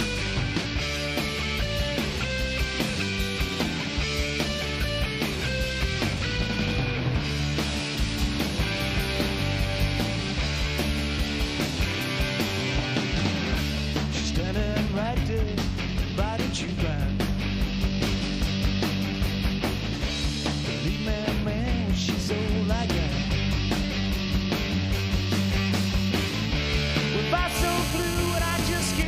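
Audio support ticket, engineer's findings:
GSM phone buzz, 27.55 to 29.03 s. Hard raspy buzz at 217 Hz, heavy harmonics, steady, about 8 dB below signal, unrelated to program. Nearby 2G handset on a call; TDMA bursts rectified in audio input stage, demodulated as pulse-rate buzz.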